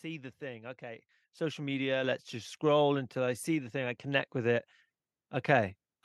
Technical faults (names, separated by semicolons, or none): microphone volume stepped up